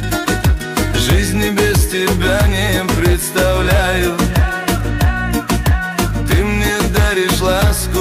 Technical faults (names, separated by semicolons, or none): hard clipping